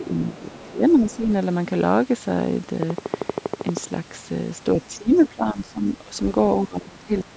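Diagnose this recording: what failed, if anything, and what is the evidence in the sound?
The failure sits in call processing, in the echo canceller's double-talk handling. Speech is suppressed in double talk three times: from the start to 1.28 s, from 4.75 to 6.14 s, and from 6.65 s to the end. The level dips by about 15 dB, and by about 20 dB in the last stretch. The canceller likely could not tell near speech from loudspeaker echo, so it turned both down.

The same canceller also lets the other side's voice leak through. Faint scraps of a second talker sit about 25 dB below the main speech. The longest runs from 0.50 to 1.16 s. Shorter ones appear from 5.15 to 5.28 s and from 7.18 to 7.24 s. All three fall inside the suppressed stretches. The echo path was likely not fully modelled while both sides spoke, so some loudspeaker sound stayed in the microphone signal.

A train of clicks runs from 2.83 to 3.78 s. 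There are around fifteen similar pulses at a regular 12.7 per second, peaking about 15 dB above the sound. They tick through pauses as well. That steady rate points to injection before call processing, likely interference on the analogue wiring or a faulty connection or power supply. The call's microphone processing tops out at 8 kHz, and that part is working as designed.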